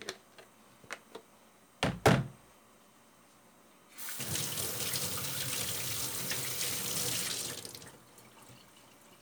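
No technical faults can be heard anywhere in the recording of these sounds.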